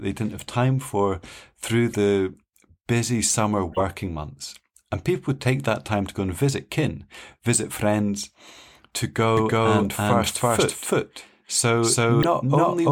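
Corrupt frames decoded appear at 0.39 s, just after "they didn't", at 1.91 to 1.94 s, after "time for through", and at 3.70 to 3.82 s, after "busy summer". Damaged compressed frames were played as if intact, so misread gains and codes put energy at the wrong frequencies. Each is a short chirp or blip, the first two at around -20 dBFS, the third longer and louder, spanning what sounds like several frames.

A doubled audio track starts abruptly at 9.37 s and runs to the end. The speech plays a second time, about 300 ms behind and about as loud as the original, with no decay or room colour. It is likely a second capture through a slower path, or an edit holding two copies out of step.

A final corrupt frame decoded at 12.22 to 12.25 s is the loudest burst, peaking near -10 dBFS.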